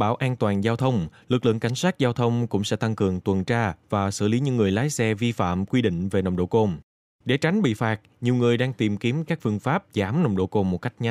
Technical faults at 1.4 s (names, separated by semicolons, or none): none